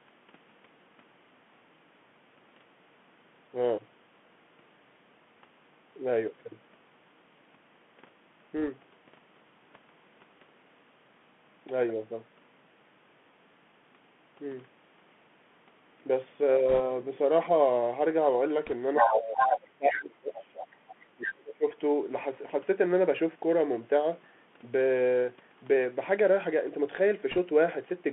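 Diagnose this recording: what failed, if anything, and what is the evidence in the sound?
Narrow, boxy sound limited to about 150 Hz to 3.4 kHz, with scratchy sibilants and granular hiss throughout: the Bluetooth CVSD headset codec, consistent with its 64 kbps one-bit delta stream.

Brief rushing crackle at 8.59–8.69, 16.69–16.80, 18.65–18.73 and 27.31–27.38 s: bit errors on a Bluetooth voice link, roughly one to one and a half percent, smeared rather than clicking.

A second voice bleeds through at 18.95–19.19, 19.38–19.59, 19.90–19.99 and 20.35–20.95 s, from strong to faint: the other side's voice leaking through, likely an echo canceller's residual in call processing.

The main voice dips by up to about 25 to 30 dB at 19.00–20.54 and 21.07–21.75 s: speech suppressed in double talk, likely by the echo canceller ducking during overlap.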